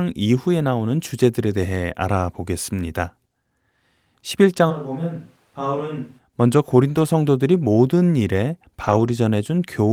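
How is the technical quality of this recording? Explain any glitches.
The recording has three glitches: one stretch of changed sound and two short rough patches near the end.

From 4.72 to 6.18 s, the sound turns roomy and hollow. It loses bass and drops about 10 dB. Room noise becomes audible underneath. The changes in and out are abrupt. This is likely a switch to a distant microphone after the close one dropped out.

At 6.89 to 6.99 s and 8.83 to 9.09 s, there are two sets of separate lost packets, 3 and 7 packets, rebuilt from error correction. Each following packet carried a low-bitrate backup, so the decoder filled the hole without silence. About 60 ms and 140 ms of audio sound grainy and noisier.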